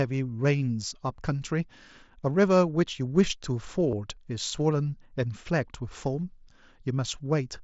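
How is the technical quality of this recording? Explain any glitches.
Two brief glitches come from concealed Bluetooth headset packet loss, at 0.44 s and 3.91 s, audible over the wideband mSBC link, whose band stops at 8 kHz. Lost packets (7.5 ms, then 15 ms, fitting one and two frames) were refilled with repeated recent waveform, the first nearly hidden, the second heard as a tiny buzzy blip. On a waveform they appear as short repeated cycles, and on a spectrogram as brief stretches of held harmonics.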